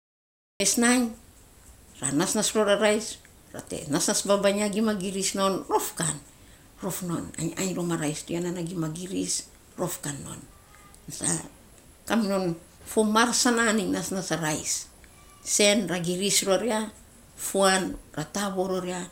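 The clip opens on digital silence until 0.60 s, where speech begins mid-sound with no attack: a cut-off start, because capture began late.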